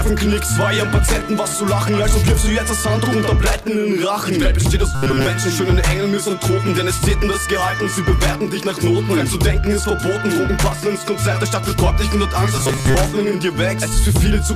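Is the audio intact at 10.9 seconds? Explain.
Yes, the audio is intact at 10.9 seconds, with no dropout, click, distortion or other fault to be heard at that moment.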